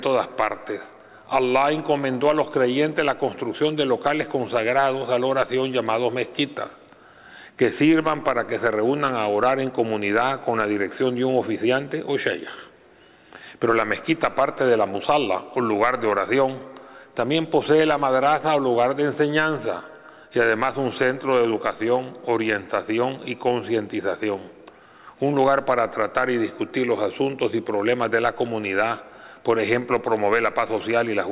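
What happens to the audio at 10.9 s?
Nothing goes wrong at 10.9 s. The audio runs on intact there, with the narrowband character of the call path and nothing above 4 kHz, which fits a G.711 A-law telephone codec.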